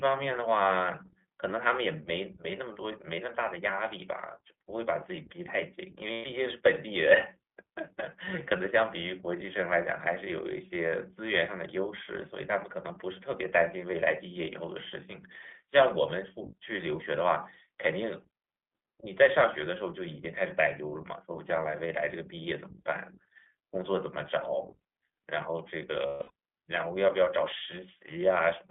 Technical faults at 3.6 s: iLBC codec

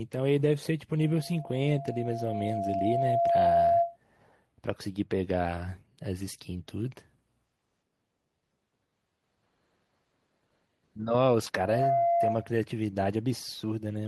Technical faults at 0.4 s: lost packet rebuilt from error correction

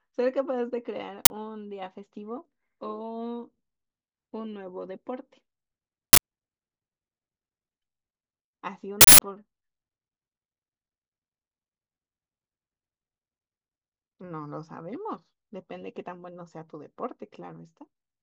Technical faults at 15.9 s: none

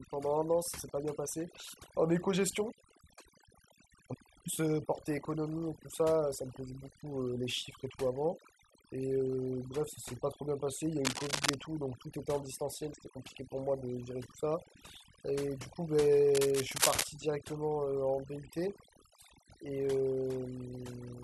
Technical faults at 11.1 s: overdone noise removal; cable scratch noise

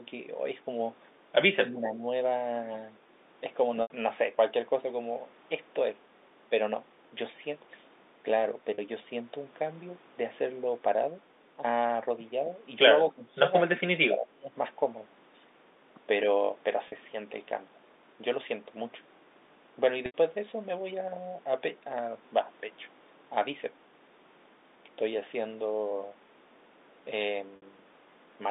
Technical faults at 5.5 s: none

